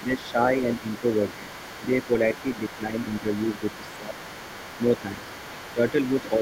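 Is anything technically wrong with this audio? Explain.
Yes. From 0.0 to 0.38 s, 0.79 to 1.03 s, 1.36 to 2.11 s, 2.55 to 3.27 s, 3.59 to 4.16 s and 5.74 to 6.33 s, the speech is suppressed in double talk. It dips by roughly 10 dB, about 15 dB near 3.6 to 4.2 s, in short bites while a second voice is active. This is likely an echo canceller turning everything down when both sides speak. The dips line up with the other voice, which sets them apart from random dropouts.

Throughout the clip, the other side's voice is leaking through faintly, roughly 20 dB below the speech. This is likely loudspeaker playback that the echo canceller only partly removed. Unlike room reverberation, it is a separate voice with its own timing, not a tail trailing the talker's own speech.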